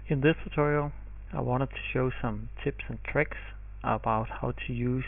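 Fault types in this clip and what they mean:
No faults turn up anywhere in this one, so there's nothing to list.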